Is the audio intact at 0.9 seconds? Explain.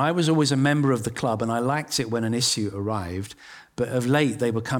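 Yes, the audio is intact at 0.9 seconds, with no dropout, click, distortion or other fault at that moment.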